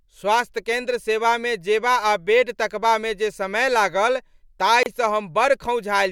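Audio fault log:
4.83–4.86 s, gap at a join of encoded pieces: two separately encoded stretches were spliced without trimming the encoder's start delay and end-frame padding, so a 30 ms hole opens in the continuous speech with smeared edges before the sound resumes where it left off.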